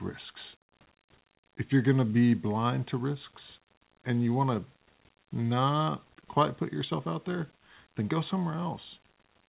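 A speech recording with no technical faults. The audio stops at 4 kHz, which fits a narrowband G.711 call codec, and a low room noise sits about 41 dB below the speech.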